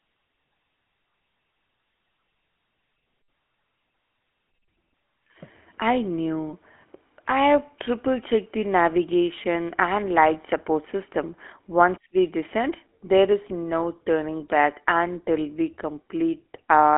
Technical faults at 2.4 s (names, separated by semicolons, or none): GSM full-rate codec